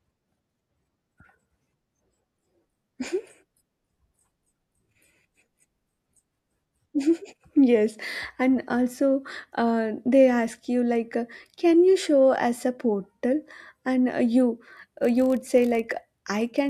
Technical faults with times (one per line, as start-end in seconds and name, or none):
14.68-16.70 block size mismatch (padded)